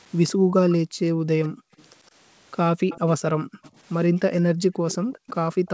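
From 0.33 to 1.71 s the room sound is pumped down and back up. That is background gated by the echo canceller. While the far side was playing, the canceller clamped the microphone, by about 40 dB at its deepest. Under a second of that span actually dips. The room tone vanishes, then snaps back when the canceller releases.

A faint delayed copy of the speech trails the talker from 1.44 to 2.08 s. It sits about 153 ms behind and roughly 25 dB down. This is echo leak. The likely cause is a loudspeaker on the other end whose canceller let some of its own playback reach the microphone and return. Short scraps recur at 2.89 to 3.0 s, at roughly 20 dB down.

The gating returns from 3.28 to 3.63 s. Close to half a second of background drops away, again by up to about 40 dB.

Echo leak follows at once, from 3.63 to 3.77 s. This scrap is weak, about 30 dB under the speech. The delay is again 153 ms.

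The last gating runs from 4.17 to 5.27 s. About half a second of room sound disappears there.

From 4.9 s to the end, the echo leak comes back with the same 153 ms lag, at roughly 20 dB down. It overlaps the tail of that gating.

Through all of this, the band stops at 8 kHz, which fits a wideband call codec such as G.722.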